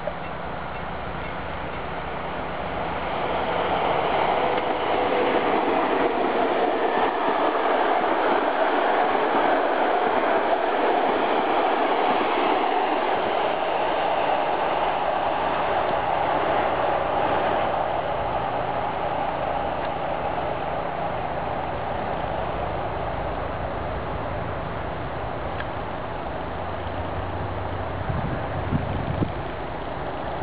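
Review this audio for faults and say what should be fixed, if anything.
Nothing stood out on listening, so there is nothing here that needs fixing.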